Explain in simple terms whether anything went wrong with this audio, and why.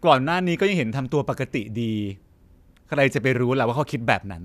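Nothing went wrong here: the speech signal holds steady throughout, with no breaks, glitches or other technical problems to be heard anywhere in the recording.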